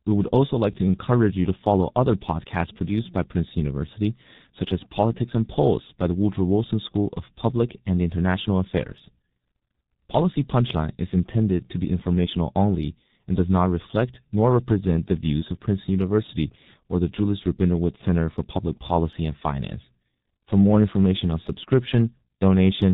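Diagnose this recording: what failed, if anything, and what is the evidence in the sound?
The failure sits at the codec stage: the speech has been through the G.723.1 codec for the whole clip, with heavy damage. The evidence is a band-limited, muffled sound with nothing above 4 kHz, a hoarse texture, and blurred consonants, which fits a rate near 6.3 kbit/s. The codec models the voice in 30 ms frames and updates that model slowly, so fast articulation smears and the fine detail of the speech is lost.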